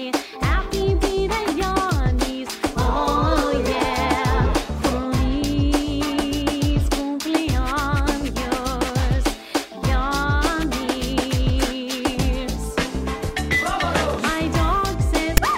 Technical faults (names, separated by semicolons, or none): file tags played as audio